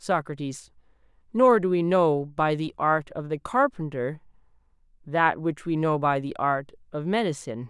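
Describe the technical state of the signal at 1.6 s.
At 1.6 s the speech signal is intact, with no audible dropout, clipping, distortion or other fault at that moment.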